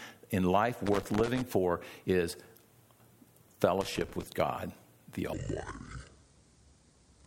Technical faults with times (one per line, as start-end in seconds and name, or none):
0.86-1.41 loose connector crackle
3.81-4.23 loose connector crackle
5.33-7.26 section at the wrong speed